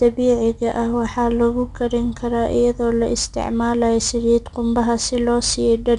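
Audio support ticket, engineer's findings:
4-bit ADPCM compression, whole clip. Gritty hiss riding loud speech, plainly audible. Nothing above 10.6 kHz. Coarse 4-bit prediction steps; fits roughly 89 kbps.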